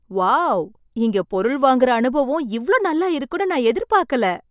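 No technical faults can be heard anywhere in the speech. Nothing in the recording calls for a time mark or a comment.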